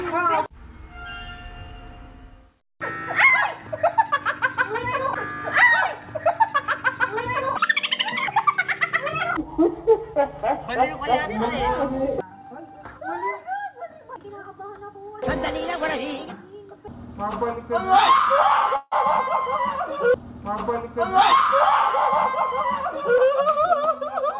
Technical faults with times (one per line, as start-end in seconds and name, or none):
18.76-18.94 call audio freeze
20.98-21.34 jitter buffer speed-up
22.50-24.23 jitter buffer speed-up